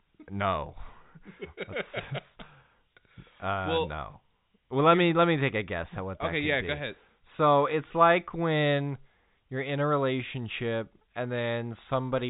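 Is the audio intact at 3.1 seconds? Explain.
Yes, the audio is intact at 3.1 seconds, with the speech passing cleanly through the G.711 telephone coding, which carries nothing above about 3.8 kHz.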